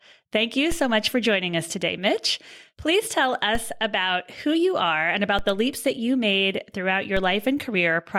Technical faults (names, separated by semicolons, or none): DC step